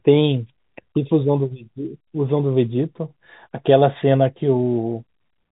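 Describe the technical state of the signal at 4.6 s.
At 4.6 s the speech is intact, carried on the normal telephone-band G.711 coding with nothing above about 3.8 kHz and no fault present.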